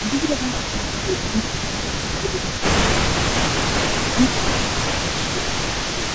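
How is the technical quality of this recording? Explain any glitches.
The recording is rough going, with two call-processing problems running through most of the speech.

The echo leak runs from start to finish. A ghost copy of the speech trails the main talker by 317 ms, sitting roughly 10 dB down, so the voice has a repeat right behind it. The likely cause is a speakerphone whose echo canceller didn't scrub out everything its microphone caught from the loudspeaker, so the leftover got sent straight back down the line.

Speech suppressed in double talk shows up as repeated dips: 0.02–1.55 s, 1.97–2.64 s, 3.04–3.94 s, 4.14–5.06 s, 5.33–5.54 s, and 5.85 s through the end. In each stretch the talker drops by up to around 10 dB and sounds ducked. That's likely because the echo canceller, while both ends were active at once, couldn't tell its own talker from the returning loudspeaker audio and pulled both down together. 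The band tops out at 8 kHz, which is just the call path's normal limit.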